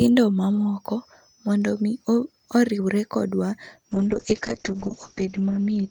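A speech clip with a call bitrate drop from 3.93 s to the end. The encoder's bandwidth narrows from 20 kHz to 8 kHz, dulling the top end, and the speech turns rough and watery, which fits a fall from around 48 kbps to 7 kbps, with the worst stretch lasting about 1.19 s. Unlike a simple low-pass filter, coarse coding adds watery artefacts, and unlike packet loss there are no gaps or dropouts.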